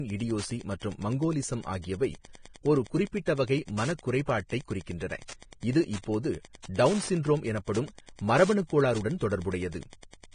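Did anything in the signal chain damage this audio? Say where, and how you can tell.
Yes. In the analogue wiring, a nearby Wi-Fi radio is being picked up and rectified: Wi-Fi interference ticks steadily about ten times a second, every 102.4 ms, throughout all of the speech, some 25 dB below it. That rhythm is the beacon interval.

At the codec stage, the speech carries heavy damage throughout, likely from Vorbis compression at a bitrate near 25 kbps. Nothing remains above 9.7 kHz, and the coarsely quantised treble turns detail into hissy, grainy noise, roughening tones and blurring attacks.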